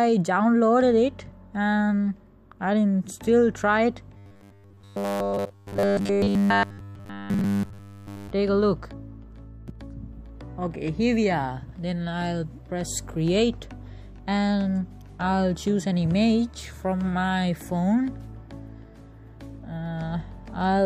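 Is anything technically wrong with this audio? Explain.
Yes. Robotic sound from repeated short buffers, 4.17 to 8.30 s: likely starved input, a 10 ms slice repeating throughout, giving a metallic 100 Hz buzz.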